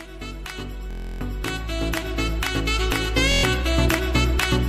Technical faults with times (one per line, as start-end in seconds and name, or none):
0.91-1.21 Bluetooth stutter
3.32-3.44 Bluetooth stutter